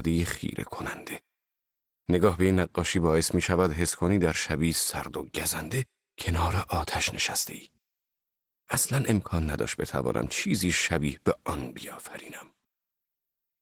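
Speech carries plainly audible Opus voice compression throughout: hoarse, slightly robotic grain consistent with a 16 kbps hybrid encoder, with highs present but coarse rather than MP3-style swirl.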